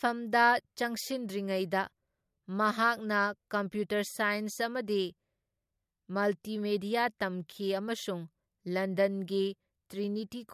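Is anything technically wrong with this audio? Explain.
No, nothing technically wrong can be heard here.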